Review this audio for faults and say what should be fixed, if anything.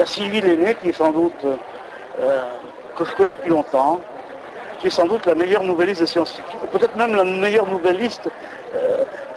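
At 3.23 to 3.37 s there is a burst of packet loss. About 120 ms of audio arrived too late or not at all, and the receiver filled the gap by stretching the last sound and fading it down. The audio then resumes further on with that stretch missing. Unlike a plain dropout, there is no silence. Unlike a single lost packet, the concealment lasts long enough to be heard as a smeared, decaying hold. A deeper jitter buffer with forward error correction would prevent it.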